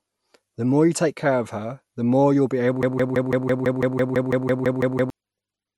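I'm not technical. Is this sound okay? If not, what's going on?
No. The playback likely stalled and kept resending its last scrap of audio, a broken-record loop: right after "more you'll be able", a 0.17-second piece repeats 14 times from 2.83 to 5.10 s, replacing what should have played.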